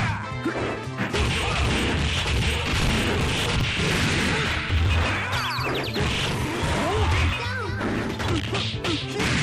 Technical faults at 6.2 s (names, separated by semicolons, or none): processor overload crackle